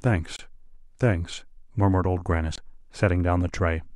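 At 0.36 s the speech drops out into about 28 ms of dead silence, and at 2.56 s it does the same for about 21 ms, each time resuming rather than fading. These short, hard gaps are most likely a Bluetooth stall: interference delayed the wireless packets, the headphones' small playback buffer emptied, and output simply halted until the retransmitted audio arrived and playback could continue.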